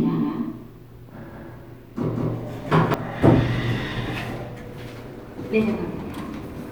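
A second capture path, likely a slower one, mixes in a doubled audio track from the start until 2.94 s: an equally loud copy trails about a fifth of a second behind, then stops abruptly.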